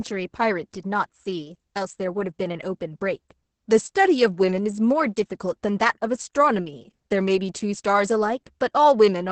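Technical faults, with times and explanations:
Throughout, Opus voice compression: the speech is muffled and hoarse, with a slightly robotic edge, and nothing reaches above about 8 kHz. Its linear-prediction voice coder is codifying the excitation coarsely, which fits a bitrate near 10 kbps.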